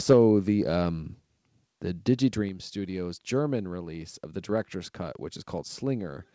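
Right at the start, from 0.09 to 0.17 s, the loudest peaks go harsh and crackly. That's likely microphone overload, with the input driven about 5 dB past the converter's ceiling so roughly 7 percent of samples get their tops flattened.

Then the level drops abruptly three times: by about 4 dB at 0.13 s, about 4 dB at 1.14 s and about 3 dB at 2.49 s. It sounds like the microphone volume stepped down, likely the call software pulling input gain during and after that clipped burst. The call path's band stops at 8 kHz, consistent with G.722.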